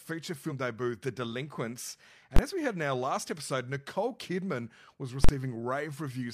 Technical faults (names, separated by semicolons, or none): damaged data in a compressed stream; invalid numbers at full scale